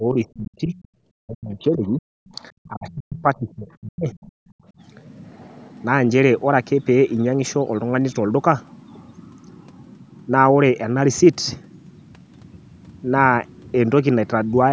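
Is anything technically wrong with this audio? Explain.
Yes. Echo cancellation trouble runs through the first five seconds of this speech.

Speech suppressed in double talk, from 0.0 to 0.75 s, 1.2 to 2.03 s and 2.68 to 4.09 s: the canceller likely mistook overlapping talk for echo and pulled the talker down, by roughly 25 to 40 dB, so the voice dips and breaks up.

The other side's voice leaking through, at 0.82 to 0.88 s, 2.64 to 2.68 s, 2.91 to 2.95 s and 3.19 to 3.37 s: residual loudspeaker echo likely slipped past cancellation, leaving faint scraps of a second voice, roughly 25 to 35 dB below the talker.

Background gated by the echo canceller, from 4.37 to 4.65 s: the canceller clamped the microphone while the loudspeaker played, so the room sound drops by about 40 dB before returning.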